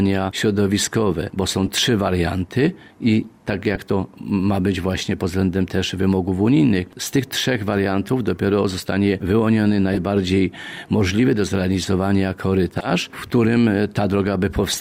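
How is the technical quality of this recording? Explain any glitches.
Four brief glitches, all of one kind: corrupt frame decoded. They occur at 1.66–1.69 s, 3.75–3.78 s, 9.93–9.98 s and 12.78–12.87 s. Damaged compressed frames were played anyway, putting energy at wrong frequencies. Each is a short chirp or burst, louder each time, the last near about -5 dBFS.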